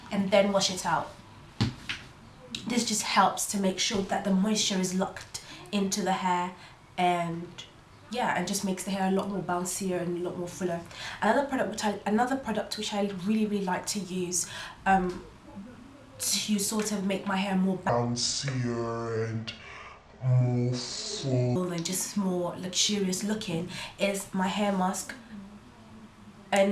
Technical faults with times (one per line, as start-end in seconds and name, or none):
17.89-21.56 wrong sample rate